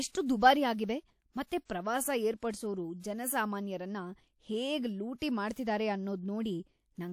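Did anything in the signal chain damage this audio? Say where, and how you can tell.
Yes. The codec stage caused pre-echo. From 1.47 to 1.51 s, a short hiss leads into the attack just before "ಪ್ರವಾಸ ಏರ್ಪಡ್ಸೋರು ಜನಸಾಮಾನ್ಯರನ್ನ ಹೇಗ್". The noise spreads about 46 ms ahead. The transform block spreads noise meant for the loud onset into the quiet gap, softening the attack.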